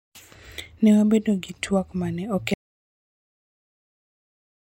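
The input feed to this speech recording was likely lost. After "gi twak ma ne" the audio drops out to total silence at 2.54 s, with no room tone, through to the end.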